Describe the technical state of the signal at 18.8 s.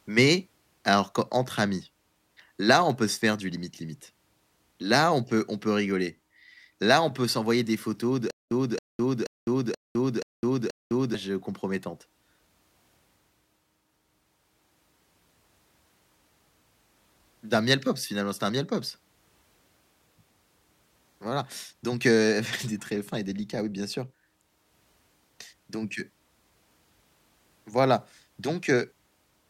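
At 18.8 s the speech signal is intact, with no audible fault at that moment.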